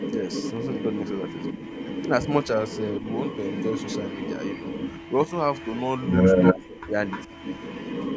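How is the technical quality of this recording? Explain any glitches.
The recording has clear call-path faults. A loud echo runs through nearly all of it, and the speech briefly dips three times.

Echo leak covers 0 to 6.59 s and again 7.07 to 8.16 s. A copy of the speech returns about 376 ms late, then about 303 ms. It is only slightly quieter than the original. The likely cause is a loudspeaker echo the far end's canceller failed to remove.

Speech suppressed in double talk appears at 1.54 to 1.63 s as a moderate dip, at 5.26 to 5.33 s as a slight dip, and at 6.53 to 6.95 s as a near-dropout. The likely cause is an echo canceller turning down its own talker along with the loudspeaker echo during overlapping talk.

The call microphone processing passes nothing above 8 kHz.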